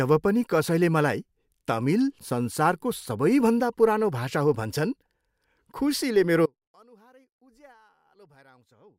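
An audio dropout to a faint residue begins at 6.46 s and runs to the end of the speech. The level falls abruptly rather than fading, leaving only a faint trace of the signal far below normal, likely from a broken link while the downstream path stayed live.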